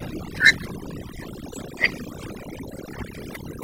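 From the start the speech carries the marks of overdone noise removal: the background sits near silence but keeps flickering with tiny twinkling specks. A noise reducer pushed too hard has switched off individual frequency bands whenever they dipped close to its noise estimate, taking the softer parts of the voice with them. Plain low-bitrate coding smears sound more evenly; this clip's telltale is the chirping residue in the pauses.

At 1.28 s the section at the wrong speed begins and runs to the end. The speech plays 1.18 times faster, so it is hurried and raised by about three semitones, with pitch and tempo shifting together. The likely cause is playback or editing against the wrong clock rate. A pitch shifter alone would leave the pace untouched, and time-stretching would leave the pitch alone, but here both move at once.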